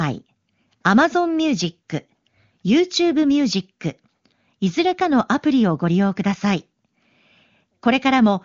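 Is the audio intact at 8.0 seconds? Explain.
Yes, the audio is intact at 8.0 seconds, with no dropout, click or other fault at that moment.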